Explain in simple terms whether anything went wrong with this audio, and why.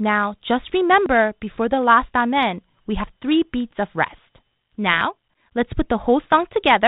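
Audio missing between chunks at 1.06 s, just before "before the last amen", and again at 5.01 s: the sound jumps forward, losing a few hundredths of a second each time. These skips, four seconds apart, likely come from a recorder working in two-second pieces and dropping a sliver at each handover.

Bit errors on an ADPCM link from 6.25 to 6.39 s: a rough burst with pops and a brief wobble in loudness. A few scrambled bits confused the decoder, which predicts each moment from the last, so the damage smeared on briefly before it recovered.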